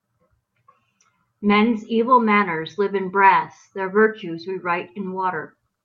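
No technical faults turn up at any point in the recording.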